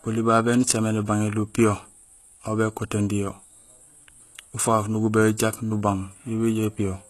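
Throughout the speech, the treble sounds rebuilt rather than recorded, most likely from HE-AAC compression at a low bitrate, near 16 kbps. Upper bands copied from lower ones make s sounds gritty and lispy, the damage is plainly audible, and nothing reaches above 12.3 kHz.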